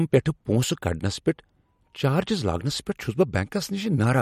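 The speech carries plainly audible MP3 compression damage throughout. Nothing is present above 16.6 kHz, a fixed treble cut. Weak frequency detail is dropped and returns frame by frame. The likely cause is a low bitrate, fitting roughly 48 kbps MP3.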